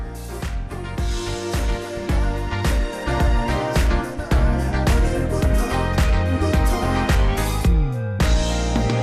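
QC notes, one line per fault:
Throughout, MP2 compression: the sound is dull and muffled, with a gurgling, granular grit as upper frequency bands cut in and out and the remaining bands are coarsely quantised; this is likely heavy MPEG Layer II coding at a low rate, consistent with around 80 kbps.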